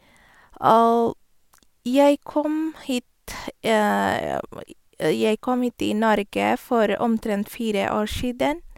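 No audible technical faults in this speech recording; nothing to flag.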